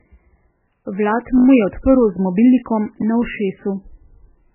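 Throughout the speech, nothing sounds above 3 kHz. It is muffled and watery. This is likely low-bitrate audio saved at a high bitrate. The smeared sound fits an 8 kbit/s MP3 re-encoded at 320 kbit/s, and the larger file cannot restore what was lost.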